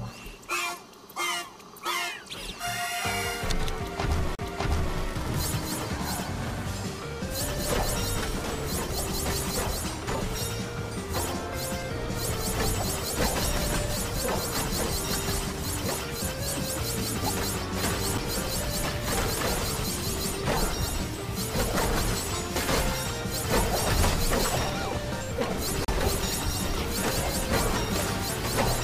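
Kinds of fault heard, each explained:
CD skip: at 4.35 to 4.39 s, 18.18 s and 25.85 to 25.88 s the sound ticks, drops out and picks up from a different point. A jolt or a flaw on the disc pushed the laser off its track onto another turn of the spiral, so the player briefly muted before reading again from the new position. The first and last gaps last roughly 40 ms; the middle one is far shorter.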